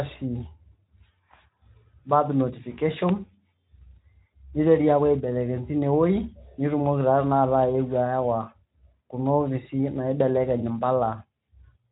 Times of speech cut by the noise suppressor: none

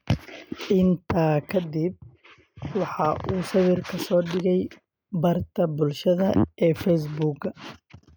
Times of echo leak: none

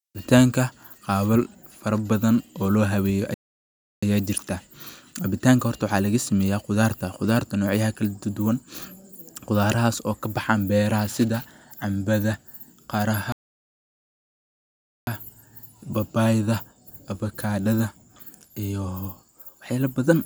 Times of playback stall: 3.34-4.03, 13.32-15.07

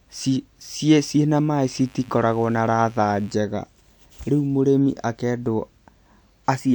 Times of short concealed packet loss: none

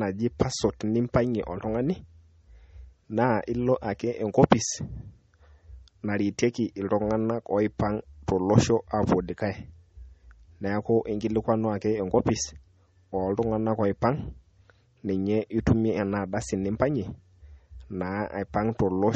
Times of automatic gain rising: none

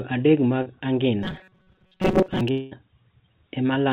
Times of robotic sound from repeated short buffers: 1.23-2.41

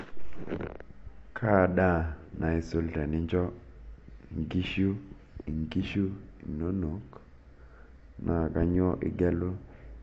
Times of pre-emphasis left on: none

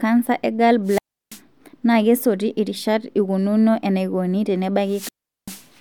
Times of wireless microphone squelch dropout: 0.85-1.41, 4.86-5.68

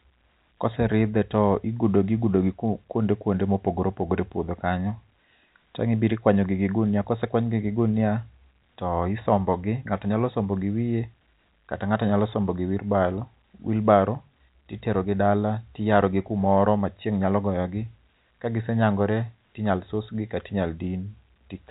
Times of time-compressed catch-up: none

